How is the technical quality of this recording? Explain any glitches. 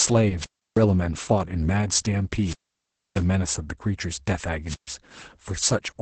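The technical quality is poor: heavy low-bitrate voice compression runs through the whole speech clip, and three wireless dropouts break it up.

Opus voice compression is present from start to finish. Nothing reaches above about 8.7 kHz, and the damage fits the SILK linear-prediction coder at a very low rate, around 10 kbps. The coder models the vocal tract with a few prediction coefficients and quantises the excitation coarsely, so the speech sounds muffled, hoarse and somewhat robotic.

Wireless microphone squelch dropouts occur at 0.38–0.80 s, 2.41–3.23 s and 4.65–4.95 s. At each point the FM radio signal weakens, hiss rises briefly, and the receiver's squelch then shuts the output. The resulting near-silent holes last about 0.32 s, 0.63 s and 0.13 s. The second dropout is the longest. Each time, the speech returns once the signal recovers.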